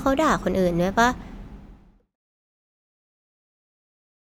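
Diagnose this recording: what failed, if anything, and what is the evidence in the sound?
Nothing stood out on listening to this speech recording, and the smooth fade-out that begins around 1 s and reaches silence at 2.16 s is a deliberate editing move rather than a failure.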